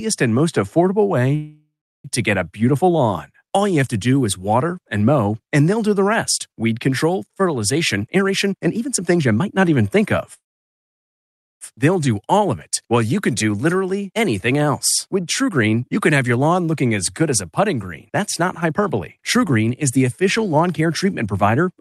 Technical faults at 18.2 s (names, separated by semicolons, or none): jitter buffer speed-up